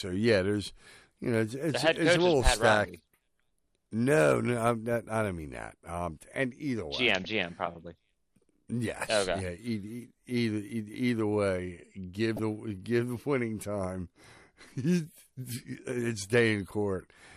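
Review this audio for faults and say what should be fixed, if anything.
MP2 compression, likely run at a low bitrate near 80 kbps, leaves the upper sub-bands without enough bits, so they switch off and flicker. Throughout, the speech sounds dull, with a plainly audible gurgling, granular texture. Encoding at a higher bitrate would prevent this.

DAB burbling comes from bit errors slipping past error correction and corrupting sub-band samples and scale factors, so single bands jump in level for a frame. Burbling lands at 7.24 s, from 12.37 to 12.42 s just before "give the winning time", and from 14.91 to 15.07 s. Better reception through improved antenna placement or signal strength would stop it.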